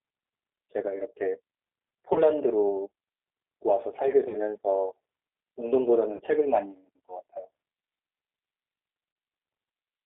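Speech heard through the G.729 codec throughout: the band runs from about 300 Hz to 3.7 kHz with nothing above, and the rough, synthetic texture fits an 8 kbit/s G.729A stream. A spectrogram would show a hard ceiling near 3.7 kHz and smeared, grainy harmonics. VoIP packet loss concealed by the speech codec breaks in at 2.13–2.24 s, 4.29–4.36 s, 6.16–6.21 s and 9.13–9.16 s. Each gap fits a single lost 30 ms packet. The decoder repeats its last pitch and filter, so the sound is briefly stretched and fades, then stays weak. On a waveform this appears as a short, regular, decaying stretch, and the spectrogram shows a flat, repeated pattern.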